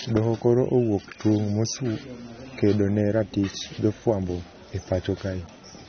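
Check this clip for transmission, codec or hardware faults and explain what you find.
There is one fault, and it runs through the whole clip. The speech sounds dull and smeared, with nothing above about 6.3 kHz and a watery, fizzy warble on sibilants and held vowels. The likely cause is AAC compression. An AAC-LC encoder short of bits lowers its cut-off and quantises the remaining frequency lines coarsely against a hearing model, leaving gaps it patches with substitute noise. The damage is plainly audible and fits a low bitrate of around 24 kbps.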